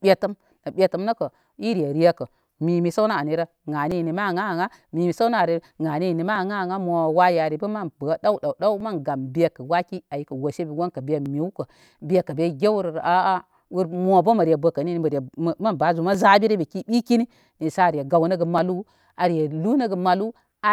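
From 1.47 s to 18.58 s, a short click or pop recurs every 2.44 s, about seven times in all. These are clock drift buffer slips, likely from two devices running on independent clocks that disagree by roughly 400 ppm. The buffer between them fills or drains until a small block of samples is dropped or repeated, which fits a slip of a few dozen samples each time.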